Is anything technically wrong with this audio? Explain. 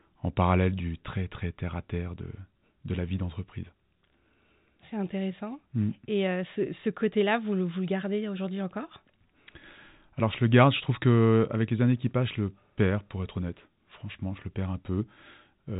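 No, this is narrowband telephone speech with nothing above about 3.8 kHz, consistent with G.711 A-law coding at 64 kbps, and no fault is audible.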